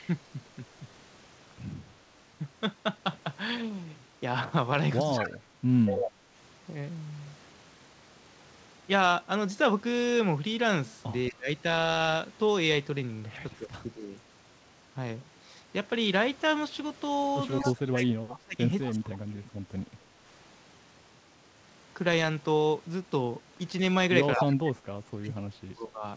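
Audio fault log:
5.0–6.09 s, 14.17–14.21 s, 17.63–18.91 s, 24.39–24.45 s: echo leak. A copy of the speech returns about 221 ms late, at roughly 5 dB below the speech at 5.0 and 24.39 s, 20 dB below at 17.63 s, and a faint 35 dB below at 14.17 s. The likely cause is a far-end echo canceller failing to remove its loudspeaker pickup.
5.16–6.31 s, 11.3–14.12 s, 17.61–19.58 s, 24.36–26.04 s: speech suppressed in double talk. The main talker drops in patches, by about 20 to 25 dB at worst, for under a second to about a second and a half per stretch. This likely comes from an echo canceller turning down both its own talker and the loudspeaker echo during overlap.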